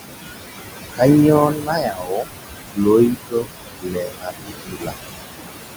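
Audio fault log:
Throughout: noise suppressor artifacts. Steady room noise, only about 6 dB under the speech, is pulled down about 19 dB between phrases and rises again under the voice.
1.48 to 2.26 s, 2.66 to 2.87 s, 3.1 to 3.49 s, 3.8 to 4.52 s, 4.69 to 4.93 s: speech cut by the noise suppressor. Quiet speech mistaken for noise drops about 18 to 21 dB, so those parts sound swallowed or faint.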